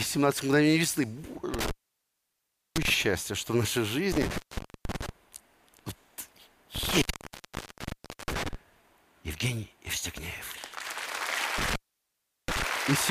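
Classic intermittent contact, like a loose plug: the audio crackles and drops to faint hiss for about 1.05 s around 1.54–2.90 s, 0.47 s around 4.12–5.09 s, 1.26 s around 6.75–8.55 s, and 0.73 s around 11.58–12.63 s.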